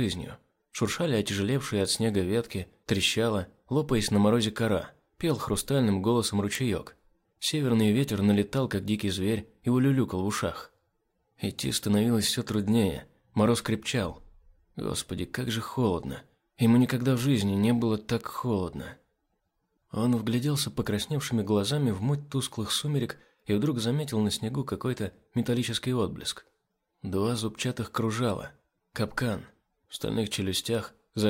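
Four sharp, isolated ticks cut through the sound at 6.55, 8.04, 18.2 and 30.75 s, and they're classic bit error spikes. Each one sounds like a single flipped bit somewhere in memory or on a digital link, knocking a sample or a few out by a power of two before snapping straight back. That's why they're broadband clicks with no relation to the audio. The first peaks at about -11 dBFS and the other three sit around -23 dBFS.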